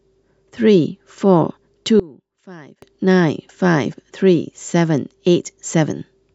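From 2.00 to 2.82 s the speech collapses, most likely because one channel inverted, with one side of the stereo pair carrying reversed polarity. When the two sides are summed to mono, everything they share cancels, so the centred voice drops by about 22 dB. What remains is only the small difference between the channels: a faint trace of the speech until full level returns.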